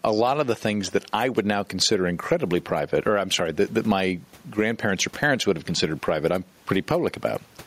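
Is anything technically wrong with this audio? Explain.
Yes, there's gain pumping running right through this speech clip. The gain swings by roughly ten decibels, pulled down the moment a loud syllable arrives, and the room noise sits about 42 dB under the speech. Loud and quiet passages end up squashed close together. The likely cause is input gain set far too high for the mic, with a fast limiter or compressor clamping it down on each peak.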